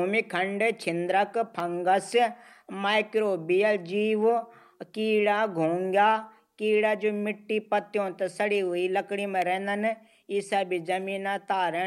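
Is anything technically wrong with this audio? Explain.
Yes. An electrical switching spike occurs at 1.60 s and 9.42 s, a sharp snap on top of the speech, likely picked up from a nearby switch or arc. The second snap is about 5 dB louder.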